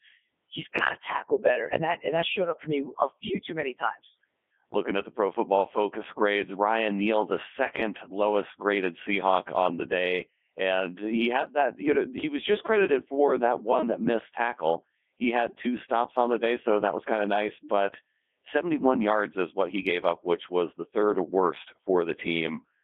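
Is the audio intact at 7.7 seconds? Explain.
No, not at 7.7 seconds, and not anywhere else in the clip either. The Codec 2 vocoder runs from start to finish. It doesn't keep the waveform. It sends only pitch, voicing, energy and a rough spectral envelope, then rebuilds the speech from sine waves. That's why it sounds so robotic and buzzy, with heavy damage. The band is squeezed to about 250 Hz to 3.5 kHz, and the texture fits its top 3.2 kbit/s mode.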